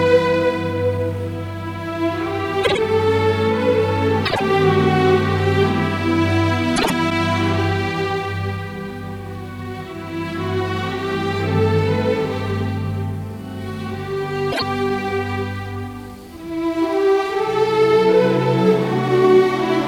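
Brief garbled flutters at 2.63–2.79, 4.25–4.41, 6.76–6.92 and 14.52–14.62 s come from frames out of order, where adjacent blocks of about 52 ms (26 ms in the last) play swapped.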